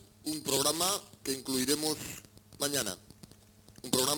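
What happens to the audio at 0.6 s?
At 0.57 s the sound jumps forward, with no gap of silence. This is most likely a dropped buffer (overrun): the samples were not read out before the hardware overwrote them, so a slice of roughly a millisecond and a half went missing and the audio on either side was butted together. That abrupt join produces the small skip in the waveform.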